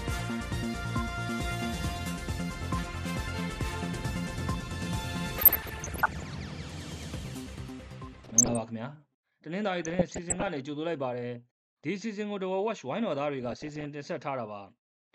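The whole clip has a dull, gurgling, granular edge, likely from MP2 compression at a low rate, around 80 kbps by the sound of it. Too few bits mean upper sub-bands switch off and flicker, and what's left gets coarsely quantised. Then there's DAB burbling from 5.37 to 6.34 s, 8.18 to 8.59 s, 9.83 to 10.49 s and 13.42 to 13.85 s. Bit errors, roughly one percent or a bit under, slip past error correction and put short blips of noise into single sub-bands.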